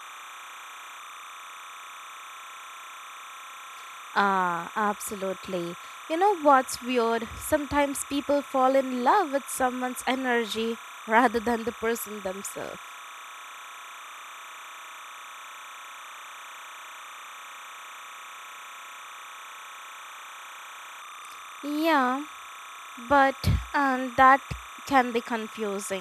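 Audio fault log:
Throughout: timecode bleed. Linear timecode is leaking in behind the speech as a steady chirping warble, sitting roughly 20 dB below the voice. The code's square wave flips between two tones near 1 kHz and 2 kHz, and its pattern repeats at 29.97 frames per second, which gives the buzzy, rhythmic flutter. On a spectrogram it shows as two unbroken horizontal bands at 1 kHz and 2 kHz with odd harmonics stacked above. The waveform carries a constant low-level fuzz even between phrases.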